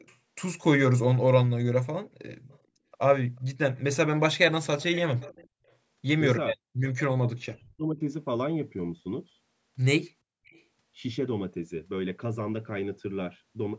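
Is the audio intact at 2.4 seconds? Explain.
No. From 2.3 to 2.57 s there is an echo leak: a faint copy of the speech returns about 0.44 s late, very quiet beneath the direct sound. The likely cause is a far-end loudspeaker whose echo canceller let part of its microphone pickup pass back.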